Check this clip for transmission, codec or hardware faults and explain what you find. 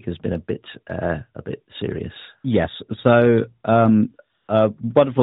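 One fault stands out, heard through the narrowband AMR path, whose light codec colouring is audible throughout. AMR comfort noise appears from 4.38 to 4.48 s. For about 100 ms, the sender's voice detector judged the talker silent and stopped sending speech frames. The receiver generated a smooth, steady synthetic hiss in place of the real background. Unlike a dropout, the gap is filled with even noise rather than dead silence, and it switches in and out abruptly.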